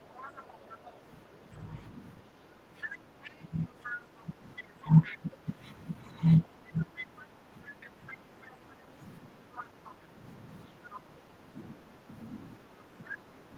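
A speech recording in which the echo canceller likely failed during double talk, turning the talker down by roughly 10 to 15 dB from 0.0 to 5.5 s and from 6.5 s to the end. The other side's voice also leaks through where the canceller likely left residual loudspeaker echo, at about 15 to 20 dB below the speech, at 0.09–0.97 s, 3.2–5.2 s, 6.4–8.6 s, 9.55–9.92 s and 10.94–11.0 s.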